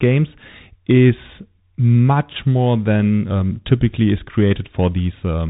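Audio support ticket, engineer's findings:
Whole clip: Bluetooth CVSD headset codec, speech dull and boxed in, nothing above 3.8 kHz, scratchy s sounds, granular hiss. One-bit delta steps lagging transients; fits a 64 kbps headset link.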